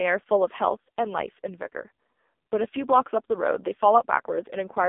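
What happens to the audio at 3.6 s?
At 3.6 s the speech carries AMR narrowband mobile codec damage, as it does for the whole clip. The codec rebuilds the voice from a vocal-tract model driven by sparse pulses in short frames. Nothing passes above 3.6 kHz, and little below 250 Hz. The damage is heavy. The voice sounds buzzy, thin and synthetic, which points to one of the lowest AMR-NB bitrates, around 6 kbps.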